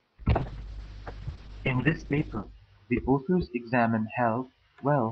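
From 0.34 s to the end, a call bitrate drop makes the speech coarse and watery, with everything above 8 kHz cut away. The roughest stretch lasts 2.1 s, which fits the encoder falling from around 48 to 7 kbps. Unlike packet loss, the sound never drops out.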